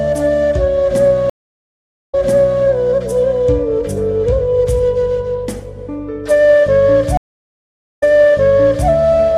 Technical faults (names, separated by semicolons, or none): stream reconnect